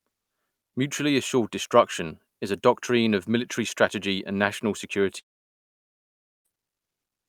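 Speech clip with one clear problem: right after "military strategy and national", the audio cuts out from about 5.19 s to 6.48 s, which is likely a long network dropout. The last sound smears into a brief fading tail, then you get roughly 1.2 s of plain silence before the talker returns. About 1.26 s of the original audio never makes it through, so the speech resumes mid-flow with that chunk simply gone.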